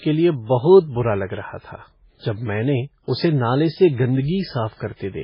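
Throughout, likely MP3 compression at a very low bitrate, around 16 kbps, strips everything above 5.3 kHz and switches weak bands on and off, leaving the speech watery and swirly. Pre-echo at 1.59 to 1.64 s, just after "बुरा लग रहा", and again at 4.75 to 4.80 s: block quantisation noise spreads about 53 ms before sharp attacks, giving a brief hiss and a smeared onset.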